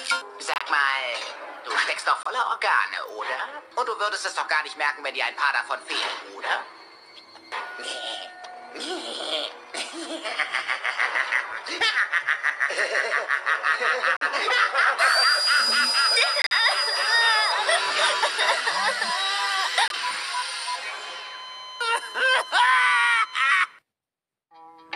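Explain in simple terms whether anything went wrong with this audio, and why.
Some compressed chunks of data were damaged, so the player rejected them and played silence instead: corrupt frame muted. The sound drops out suddenly at 0.48 to 0.62, 2.23 to 2.27, 14.17 to 14.23, 16.42 to 16.52 and 19.88 to 19.94 seconds, then resumes on time.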